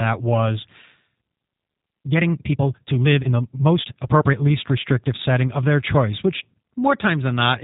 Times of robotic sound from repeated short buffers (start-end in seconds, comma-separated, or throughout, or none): none